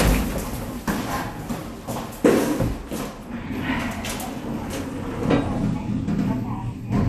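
Likely low-rate MPEG Layer II encoding, MP2 compression, throughout the clip, with a bit budget that fits roughly 80 kbps. Starved of bits, the codec shuts off upper sub-bands, leaving nothing above 14.4 kHz, and coarsely quantises the rest, so the sound turns dull, gurgling and grainy.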